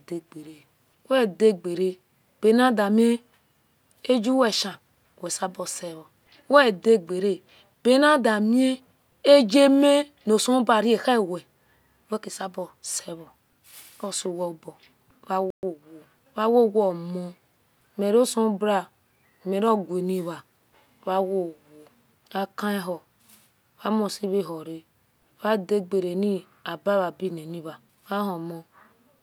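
A playback stall at 15.50 to 15.63 s cuts the speech to silence for about 126 ms, likely because the player ran short of data or its thread was blocked. Time-compressed catch-up follows from 15.63 to 15.87 s: the player trims and cross-fades small slices to clear the backlog, so the speech rushes at 1.5 times normal speed with unchanged pitch.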